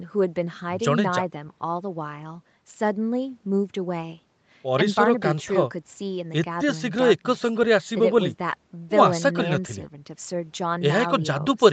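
Nothing goes wrong in this speech, which simply carries the ordinary character of a call, with the top end stopping at about 8 kHz as you'd expect from the microphone processing and the call codec.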